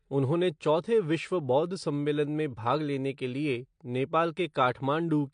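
Throughout, likely AAC compression at a bitrate that fits about 32 kbps strips everything above 9.8 kHz, leaving the speech dull and plainly smeared.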